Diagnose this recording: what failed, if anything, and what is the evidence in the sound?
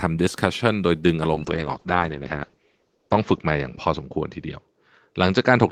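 A call bitrate drop at the codec stage begins at 1.36 s and lasts to the end of the clip. The speech turns coarse and watery as the encoder falls from 32 kbps to 8 kbps, and the top of the spectrum narrows from 20 kHz to 8 kHz, leaving it muffled. The harshest stretch lasts about 1.6 s. Unlike packet loss, there are no gaps or glitches, just degradation.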